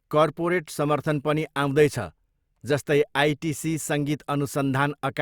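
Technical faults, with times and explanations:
No technical faults can be heard in this speech recording. There is nothing here that needs a time or an explanation.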